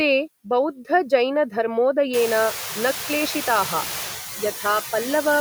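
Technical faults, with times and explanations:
Throughout, noise suppressor artifacts: the suppressor dips the bands it takes for steady noise frame by frame, only by about 2 dB, so the background sinks slightly in pauses and swells under the speech, clearest once room noise jumps around 2 s.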